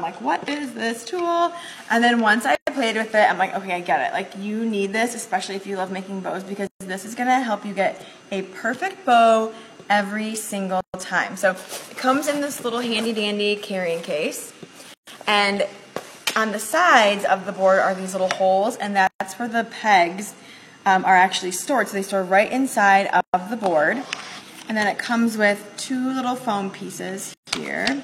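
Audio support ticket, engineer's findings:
Gap at a join of encoded pieces at 2.55, 6.67, 10.81, 14.94, 19.07, 23.21, 27.34 s, about every 4 s. 0.12 to 0.13 s gaps with smeared edges. Separately encoded segments were concatenated untrimmed, leaving encoder delay and last-frame padding.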